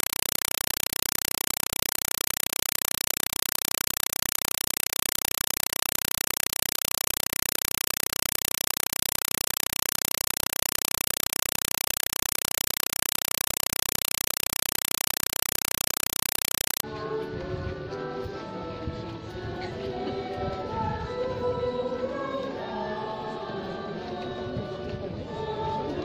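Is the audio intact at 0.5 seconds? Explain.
No. At 0.5 seconds the audio is a compressed stream played as audio. It runs from 0.0 to 16.83 s. A Dolby Digital (AC-3) stream, likely around 192 kbps, is being treated as plain samples instead of being decoded. Each coded frame comes out as a 4 ms burst of noise, then silence from the zero padding. The bursts repeat 31.25 times a second. The result is very loud, chattering static in place of the sound.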